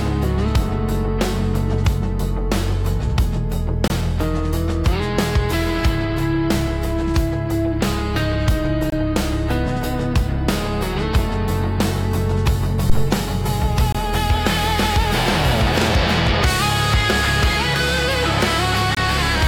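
At 3.88–3.90 s and 8.90–8.92 s, the sound drops out for about 23 ms in a gap between chunks. The audio was delivered in 5-second pieces with a silent stretch left at each join. On a waveform these appear as flat, sharp-edged holes, and on a spectrogram as narrow vertical blank strips.

From 12.90 to 13.15 s, a phantom power thump appears as a deep low-frequency knock. A supply switched on or off on the live input, and the voltage step passed through the coupling capacitors before decaying in about 57 ms. It shows as a large one-sided waveform swing and a bright patch at the bottom of the spectrogram.

The same 23 ms gaps between chunks recur at 13.92–13.95 s and 18.95–18.97 s, keeping the 5-second spacing.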